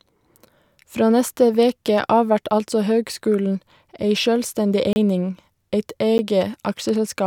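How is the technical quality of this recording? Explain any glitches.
The speech has two dropouts where the audio briefly falls to dead digital silence. The first is a block of digital silence from 4.93 to 4.96 s, a 30 ms hole. The second, at 6.18 s, lasts only 10 ms. In each case a run of samples simply drops to silence, most likely because the output buffer wasn't filled in time. There's no fade in or out, so the longer gap sounds like a short hole, and the brief one comes across as a tick.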